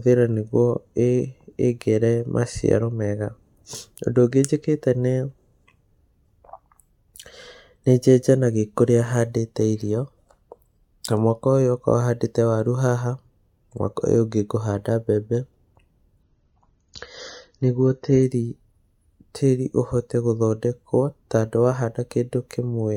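Speech, with an adaptive stream dropping to a lower bitrate from 16.23 to 18.23 s. The connection likely slowed, so the player switched to a leaner encode. Quality changes suddenly, with no gap. Nothing sounds above 7 kHz, and codec artefacts rise. It fits a fall from about 96 to 24 kbit/s.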